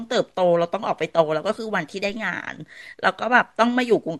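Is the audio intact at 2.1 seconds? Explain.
No. A DC step occurs at 2.09 s. The zero line of the waveform jumps suddenly by about -35 dBFS, so the whole signal rides on a new offset. This shift is heard as a brief low thump. The speech itself continues unchanged through it. The offset does not hold. It drains away slowly, the way a 2 Hz high-pass would remove it, so the baseline eases back toward zero afterward.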